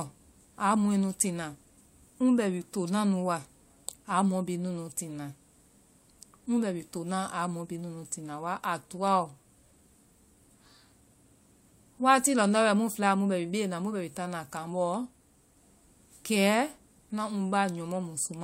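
A speech recording, with nothing technically wrong in it.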